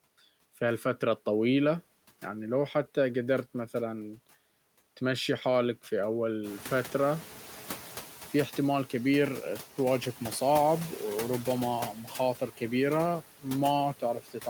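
Noise suppressor artifacts run through the whole speech clip. Steady background noise is pulled down by about 9 dB, frame by frame. The noise suppressor catching up starts at 6.43 s, just after "تمشي حالك في". Room noise jumps by about 14 dB around 6.5 s. The suppressor's noise estimate lags, so reduction falls to about 5 dB. The louder noise then sinks over 1.6 s, settling by 8.03 s.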